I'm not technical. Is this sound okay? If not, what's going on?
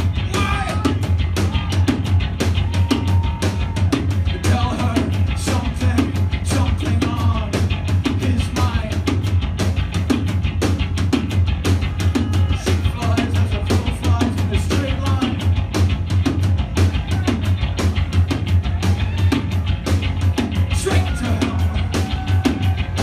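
Yes, nothing stood out as a problem on listening.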